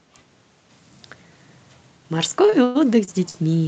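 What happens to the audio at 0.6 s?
Nothing goes wrong at 0.6 s: the speech passes through the call path intact there, with no dropout, glitch or distortion.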